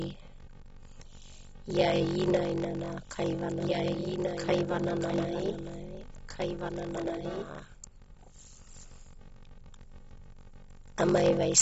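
From start to finish the speech carries a steady buzz at 46.9 Hz, and everything runs slow at 0.861 times normal speed while the pitch stays about where it should be. This is a block size mismatch (padded). One stage delivers shorter blocks than the next stage reads, and the shortfall in each block is filled with silence. The buzz rate and the slowdown together fit a 1,024-sample read block that receives only about 880 samples of real audio each time.

Also throughout, nothing is present above 7.7 kHz, so the top end sounds dull. There is plainly audible smearing, with a warbling, fizzy grain on sustained sounds and sibilants. The likely cause is AAC compression at a low bitrate, consistent with AAC-LC at around 33 kb/s. At that rate the encoder lowers its cut-off and quantises the remaining frequency bands coarsely, which leaves gaps and substitute noise in the spectrum.

From 1.91 s to 8.69 s a second, full-band copy of the speech runs about one and a half seconds behind the first, roughly 5 dB quieter. 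It has no reverberant tail or room colour, and it starts and stops abruptly at those two points. This is a doubled audio track, likely from the same signal being picked up a second time through a slower path and mixed back in.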